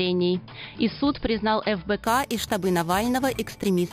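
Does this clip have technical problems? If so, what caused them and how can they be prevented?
Yes. From 2.04 s to the end, a bright metallic fizz rides on top of the sound and rises and falls with its level. This is imaging from sample-and-hold upsampling: audio at 11 kHz was raised to 44.1 kHz by repeating each sample without an interpolation filter. The repeated steps leave mirrored copies of the original spectrum, the first spanning roughly 5.5 kHz to 11 kHz at about 17 dB below the signal, with its pitch movement inverted. To prevent it, resample with a proper band-limited interpolator whose low-pass filter removes everything above the original 5.5 kHz Nyquist limit.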